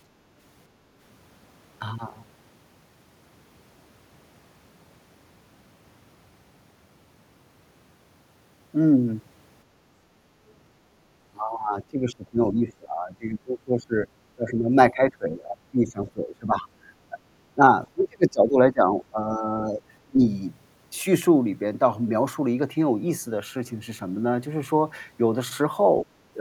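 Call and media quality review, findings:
Speech suppressed in double talk, 11.29–14.07, 14.36–16.67, 17.10–17.17, 17.55–17.63, 17.86–18.94, 19.10–19.81, 20.06–20.20 s. Speech dips by about 10 to 25 dB, roughly 7 s in total. Likely echo canceller attenuating near-end speech mistaken for loudspeaker echo.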